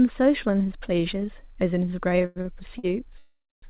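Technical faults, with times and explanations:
2.22–2.85 s, repeated stalls (stutter): late packets emptied the jitter buffer four times, so 194 ms of held-over sound fills the gaps and the speech drags and stutters.
3.18–3.64 s, call audio freeze: packets were likely held up in transit, so the last sound carries on, fades, then goes silent for 250 ms before speech resumes intact.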